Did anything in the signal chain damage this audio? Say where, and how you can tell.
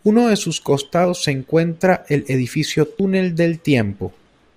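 Yes. The buffer or driver stage likely lost roughly 50 ms at each 2-second chunk handover, then spliced the edges together: audio missing between chunks. The speech jumps abruptly, without a gap, at 1.05 s after "uno de sus" and at 3.00 s after "se encuentra el edificio".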